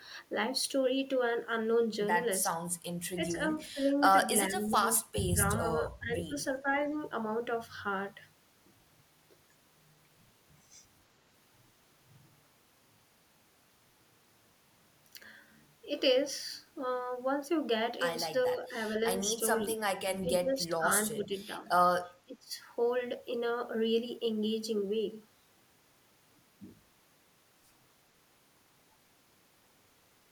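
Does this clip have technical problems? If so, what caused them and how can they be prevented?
Yes. Speech suppressed in double talk occurs at 3.29–3.8, 4.5–4.81, 5.27–5.65, 5.99–6.32, 18.46–18.74, 19.19–19.4, 20.2–21.65 and 22.25–22.53 s. The speech dips by about 5 to 25 dB, deepest near 22.3 s, likely because the echo canceller could not separate the local talker from the overlapping loudspeaker echo and attenuated everything. Using a canceller with reliable double-talk detection, or headsets instead of open loudspeakers, prevents this.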